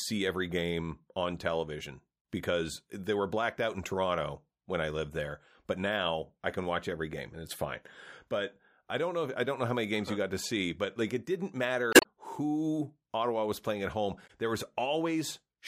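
At 11.90 to 12.06 s and 14.26 to 14.31 s, damaged data in a compressed stream makes the decoder lose frame sync, giving brief chirps, squawks, clicks or short holes that show as broadband smears and waveform discontinuities.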